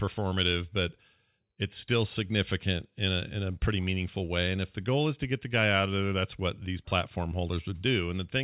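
No technical faults are audible in the speech, which carries the normal character of a mu-law telephone channel, with nothing above 4 kHz and a faint quantisation noise that follows the level of the signal.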